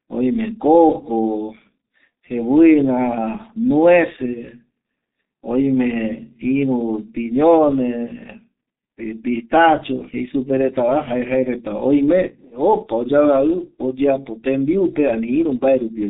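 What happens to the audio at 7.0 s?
At 7.0 s the speech is passing through G.723.1 codec damage, which runs through the whole clip. The codec rebuilds speech from a coarse voice model refreshed only every 30 ms frame, and its heavy artefacts fit a rate near 6.3 kbit/s. The result is muffled, hoarse speech with smeared consonants and nothing below 200 Hz or above 3.7 kHz. A plain telephone band limit would be dull but clean; here the roughness gives away the codec.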